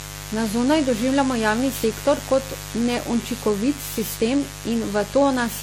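A mains buzz runs through the whole clip. It is a steady, raspy buzz built on 50 Hz. Its harmonics climb well up into the kilohertz range. The buzz sits roughly 15 dB below the speech. A dimmer, rectifier or poorly shielded cable injects sharp switching spikes twice per mains cycle. Those spikes carry the harmonic train that gives the buzz its edge.

Generation loss is also present from start to finish. The speech sounds swirly, smeared and hollow. Consonant attacks are blurred. Nothing remains above 17.7 kHz. The damage is heavier than one pass of a lossy codec would explain. The likely cause is repeated decoding and re-encoding, around seven times, with AAC-LC at a rate that points to about 64 kbit/s. Each pass quantises on a shifted frame grid, so the noise and spectral holes pile up.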